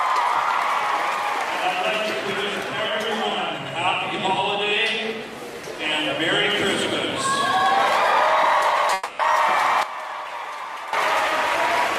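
The audio has two faults. A long network dropout runs from 8.93 to 9.21 s: about 260 ms of sound is missing and is bridged by a fading continuation of the preceding audio, likely from packets lost in transit. A sudden gain jump at 9.83 s drops the level by about 12 dB until 10.93 s, sound and background together, likely from an unramped digital gain change.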